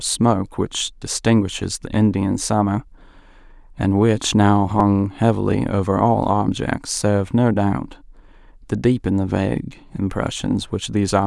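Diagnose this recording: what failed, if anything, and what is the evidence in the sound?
Driver or buffer stage: a repeated buffer at 4.8 s. A tiny slice plays twice more with hard joins, heard as a click or brief buzz. That fits a 5 ms buffer starving, losing about 10 ms.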